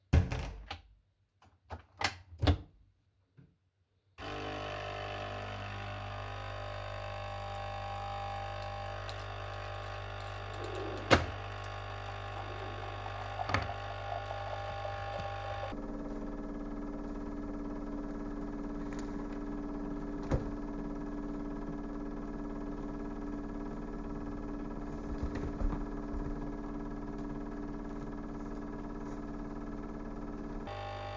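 From 15.72 s to 30.67 s there is a wrong sample rate. The sounds play at about 0.36 times speed, dropping nearly 18 semitones, slow and deep, which fits 44.1 kHz audio played at 16 kHz.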